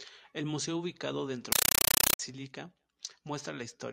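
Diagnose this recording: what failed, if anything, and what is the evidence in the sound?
Playback failed: a compressed stream played as audio. From 1.52 to 2.19 s, loud chattering static replaces the speech, pulsing 31.25 times a second in 8 ms bursts, which fits undecoded AC-3 frames.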